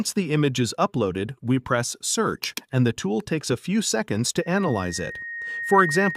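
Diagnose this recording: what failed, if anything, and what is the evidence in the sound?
At 4.42 s a 1.9 kHz tone swells over about a second and a half to full level: loudspeaker feedback squeal, the acoustic speaker-to-microphone loop exceeding unity gain.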